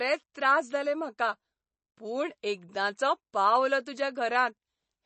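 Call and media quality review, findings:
MP3 compression, likely a starved encoder at around 32 kbps, throughout: treble cut above 8.3 kHz, weak bands flickering per frame, giving plainly audible watery swirl and smeared consonant attacks.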